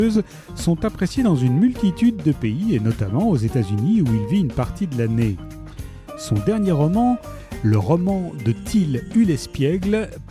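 No technical faults can be heard anywhere in the signal.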